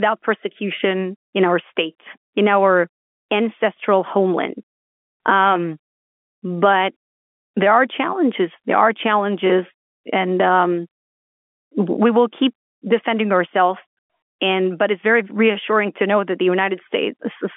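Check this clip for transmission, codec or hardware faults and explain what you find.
No faults found: the speech sits in the expected 200 Hz to 3.4 kHz telephone band, consistent with ordinary G.711 telephone coding at 64 kbps, with any quantisation noise no more than faint and tracking the signal level as that format does.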